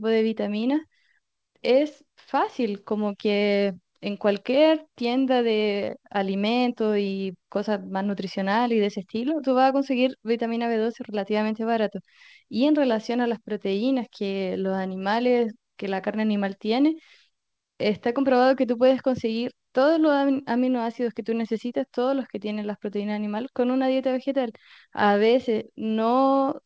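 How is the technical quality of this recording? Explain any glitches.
No glitches or faults can be heard anywhere here.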